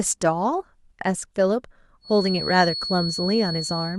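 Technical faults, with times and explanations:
2.0 s to 3.98 s, feedback whistle. From 2.0 s until the clip ends, a thin, steady tone at 4.4 kHz sits behind the speech. It stays about 10 dB below the speech and swells and fades slowly in level. It neither builds nor dies away. The likely cause is a loudspeaker feeding back into the microphone, with the loop held just at the edge of feedback. So one high frequency keeps ringing without running away.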